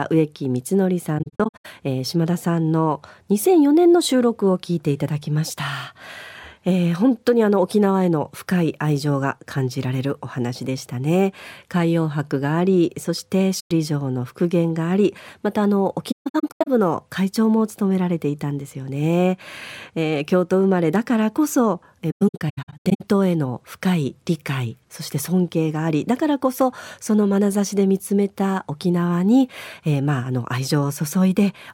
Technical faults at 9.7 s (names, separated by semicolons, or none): none